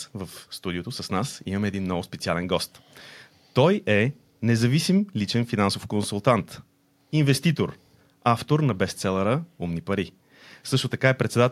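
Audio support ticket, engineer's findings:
Checked the speech recording end to end and found nothing to report: no audible faults anywhere, so there's nothing to chase on our side.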